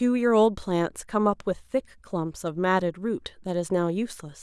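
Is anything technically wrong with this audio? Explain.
No, nothing technically wrong stood out on listening to this speech recording.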